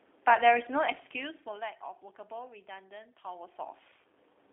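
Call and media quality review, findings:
G.729 codec, throughout: narrow line band of 300 Hz to 3.6 kHz, with rough, buzzy, synthetic speech texture from pulse-coded excitation, consistent with an 8 kbit/s G.729-type codec. Plain band-limiting alone would sound clean. Level shifts near 1 s and 3 s are talker movement.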